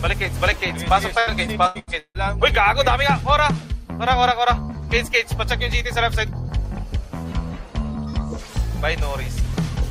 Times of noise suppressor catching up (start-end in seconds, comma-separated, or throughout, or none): none